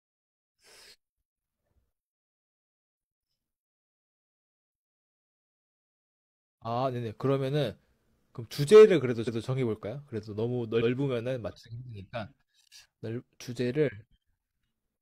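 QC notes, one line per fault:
9.24–9.41 s, repeated frames: a 0.17 s stretch of the speech plays twice in a row, heard as a stutter. A run of compressed frames, which fits about four, was sent or written again, so the decoder replays it and the clip gains 0.17 s.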